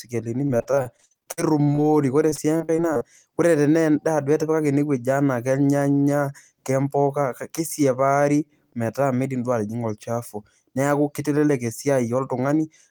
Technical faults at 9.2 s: none

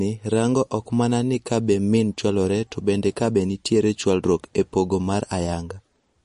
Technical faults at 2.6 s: MP3 compression

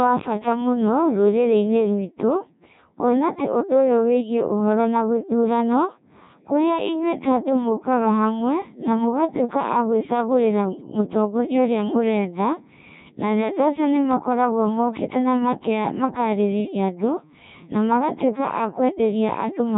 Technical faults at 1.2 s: Codec 2 vocoder

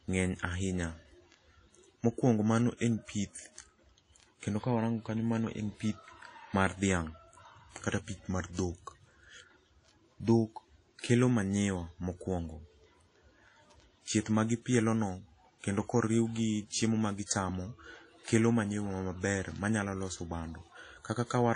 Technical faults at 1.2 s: WMA compression

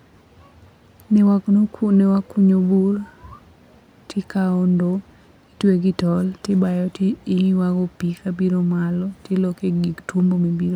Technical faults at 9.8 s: none

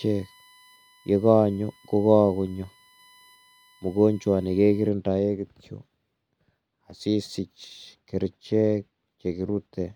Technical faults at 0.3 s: USB whine

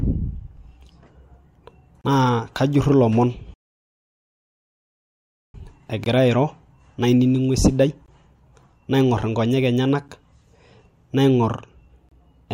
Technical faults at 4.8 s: playback stall

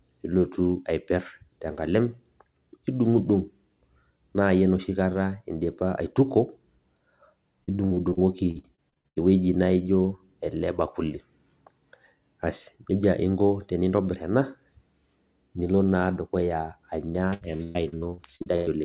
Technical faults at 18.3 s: repeated packet loss (robotic sound)

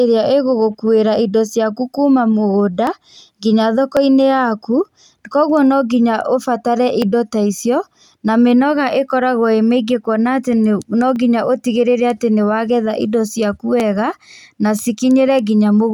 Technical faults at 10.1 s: none

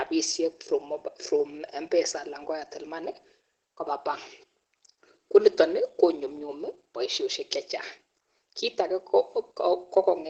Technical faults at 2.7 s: Opus voice compression

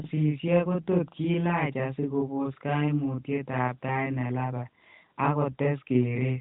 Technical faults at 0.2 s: channel delay (doubling)

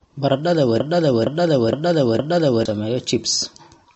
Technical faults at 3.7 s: MP3 compression

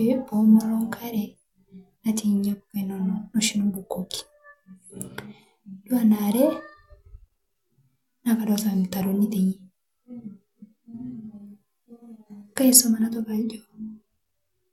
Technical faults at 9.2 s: none

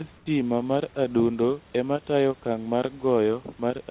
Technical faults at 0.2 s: comfort noise in place of the background

